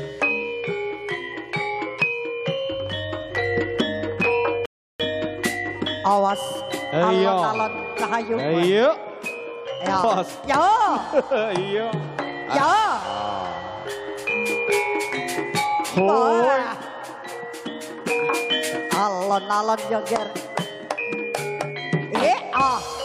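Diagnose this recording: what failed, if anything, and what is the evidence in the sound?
A rebuffering stall runs from 4.66 s to 5.00 s, at the playback stage where streamed audio is fed to the output. The sound drops to silence for about 341 ms, then picks up at exactly the point where it stopped, with no material skipped or repeated. The player's download buffer ran dry, so it paused output until enough new data arrived. Nothing is lost, but the clip runs longer by the length of the gap.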